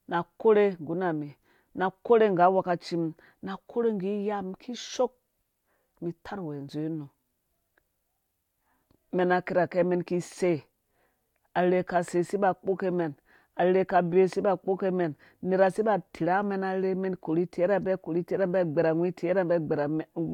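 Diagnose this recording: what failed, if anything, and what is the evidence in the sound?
Nothing failed: no stage of the chain leaves any audible evidence of a fault in this speech recording.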